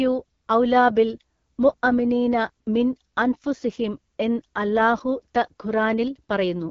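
From start to finish the speech carries AMR wideband (HD Voice) codec damage, plainly audible as a rough, raspy grain, which fits one of the lowest modes, around 8.85 kbit/s. A spectrogram shows smeared harmonics, a noise-like band near 6.4 to 7 kHz, and nothing above 7.4 kHz.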